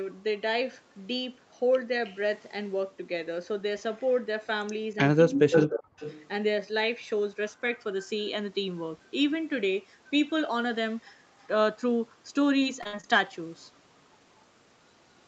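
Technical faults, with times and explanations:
5.25 to 6.0 s, speech suppressed in double talk: The speech dips sharply, by about 40 dB at its deepest, over roughly 0.7 s in total. Both sides were likely talking at once. The echo canceller could not tell the talker from the echo, so it muted both.
5.31 to 5.67 s and 5.98 to 6.28 s, echo leak: A copy of the speech returns 309 ms late. The first burst is about as loud as the speech itself. The second is much weaker, around 20 dB down. A loudspeaker's echo canceller likely failed to remove all of its pickup.
12.59 to 13.05 s, repeated packet loss (robotic sound): Four short holes break up the sound, missing 120 ms in all, the longest 58 ms. Each hole is filled by stretching the previous sound, covering 26% of the span. The rapid patching gives a choppy, robotic texture.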